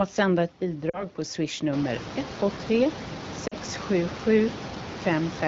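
At 0.89 to 1.04 s, between "att sända ett" and "på swishnummer", and again at 3.47 to 3.54 s, there are lost AMR speech frames. About 40 ms drops out each time, which fits two frames. The decoder stretches the last good sound with falling gain, so you get a short smeared dip before the speech comes back.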